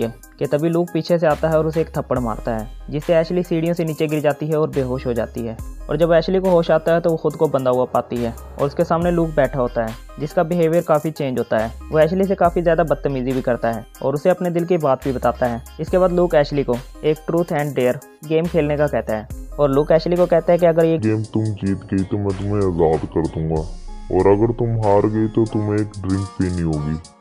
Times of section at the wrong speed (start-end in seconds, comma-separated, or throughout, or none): 20.99-27.20